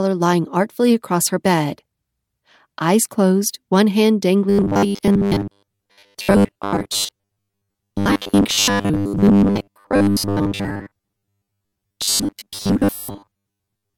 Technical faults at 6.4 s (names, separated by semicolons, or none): robotic sound from repeated short buffers